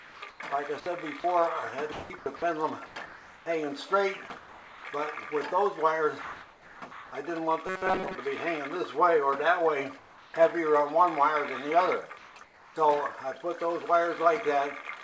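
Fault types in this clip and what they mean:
Comfort noise in place of the background: pauses at 0.0, 4.38, 6.22, 9.98 and 12.18 s become smooth, featureless noise, up to about 4 dB quieter, likely from discontinuous transmission; spectrograms show uniform, detail-free texture.
Sound chopped by the voice detector: between 1.92 and 3.46 s the sound repeatedly drops into synthetic fill, likely voice-detector switching; waveform shows abrupt gaps, spectrogram alternating detailed and flat patches.
Robotic sound from repeated short buffers: from 7.67 to 8.16 s a rigid 188 Hz metallic buzz, likely repeated buffers of about 5 ms; spectrogram shows evenly spaced harmonic stripes.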